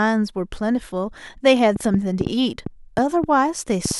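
Something in the chain, likely interference from nearby equipment or a faulty connection or power supply, begins injecting short pulses at 1.76 s and keeps going until 3.92 s. The result is a train of clicks, about ten of them at an average of 3.7 per second but unevenly spaced, each with much the same sharp shape. They stand roughly 15 dB above the speech, so they pop clearly over the talking and are also heard in the gaps.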